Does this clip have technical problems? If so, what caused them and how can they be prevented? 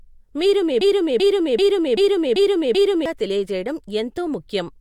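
Yes, a broken-record loop right after "మీరు మీ": from 0.81 to 3.06 s a 0.39 s chunk repeats six times, likely a stalled stream resending its last buffer. Stall detection with proper underrun handling prevents it.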